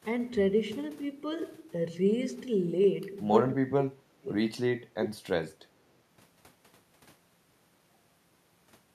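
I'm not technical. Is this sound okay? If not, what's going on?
No. From 3.64 to 4.28 seconds the speech suddenly sinks, nearly vanishing for a moment before coming back. This is called speech suppressed in double talk. It is likely that both people on the call spoke at the same time, and the call's echo-removal feature couldn't tell this talker's voice apart from the other person's voice coming out of the loudspeaker, so it turned the whole thing down.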